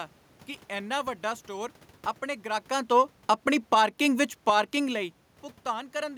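Right after "ਇੰਨਾ ਵੱਡਾ ਸਟੋਰ ਆਪਣੇ", from 2.7 to 4.64 s, there's automatic gain falling: the AGC decides the input's too hot or its background noise too strong and eases its gain down by about 5 dB. Speech and room noise sink together, separate from the talker shifting around 2.5 s.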